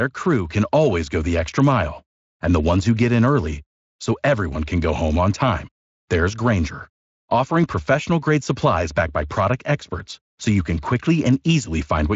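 Nothing goes wrong anywhere in this speech; it simply sounds like a Speex stream at a fairly generous setting, with its top end stopping around 7.6 kHz.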